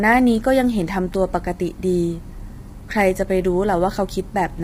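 Across the whole clip the speech sounds rough and grainy, with noise between harmonics and a dulled top band, likely low-delay AAC compression at a very low bitrate.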